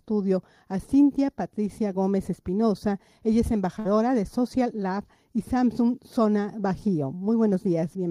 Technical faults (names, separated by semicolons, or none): burst of packet loss